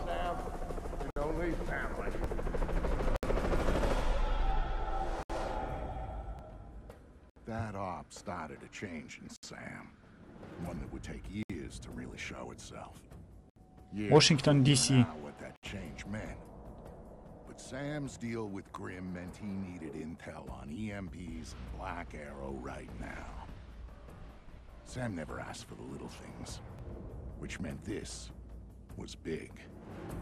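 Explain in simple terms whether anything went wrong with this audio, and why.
Two problems show up. There's a gap at a join of encoded pieces every two seconds, at 1.10, 3.16, 5.23, 7.30, 9.36, 11.43, 13.50 and 15.56 s. Separately encoded pieces were glued together untrimmed, leaving roughly 60 to 70 ms of silence. Overlapping chunks also cause a tiny stutter every four seconds, at 2.24, 6.39, 10.54, 14.68, 18.76, 22.77 and 26.79 s. Each chunk starts early, so about 13 ms plays twice.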